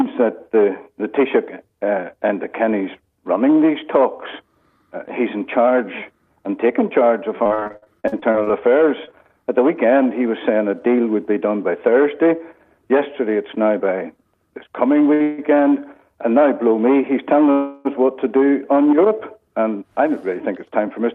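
From 7.43 to 8.51 s, packets kept going missing or arriving late, producing repeated packet loss with a robotic sound. Fifteen holes, the longest 57 ms, were patched by extending the preceding audio, covering about a third of the stretch. The sound turns choppy and mechanical, with about 300 ms lost.

At 9.05 s, a short concealed packet loss left 20 ms that never reached the decoder. The receiver bridged it with 15 ms of continued sound, heard as a brief smear where a small piece drops out.

From 10.86 to 11.15 s, the jitter buffer held too much audio and trimmed around 40 ms in small pitch-period slices. This jitter buffer speed-up makes the passage run at 112% speed with its pitch unchanged, so it sounds hurried.

At 15.14 s, a late packet emptied the buffer for 60 ms, causing a short stall. The last sound is held slightly too long, with nothing lost.

A call audio freeze follows directly from 15.22 to 15.40 s, and a second runs from 17.52 to 17.87 s, likely from packets held up in transit. 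The audio stalls into a drawn-out, fading continuation of about 160 ms and then 330 ms, with no silence. It resumes where it stopped, with nothing missing.

From 19.59 to 21.13 s, another jitter buffer speed-up removes about a tenth of a second. The sound runs at 107% speed and feels rushed.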